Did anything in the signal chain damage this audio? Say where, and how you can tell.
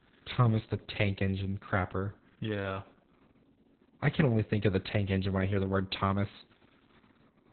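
Yes: Opus voice compression at the codec stage, throughout the speech. Nothing above 4.3 kHz, and coarse SILK excitation coding sounds hoarse and robotic, fitting narrowband coding near 6 kbps.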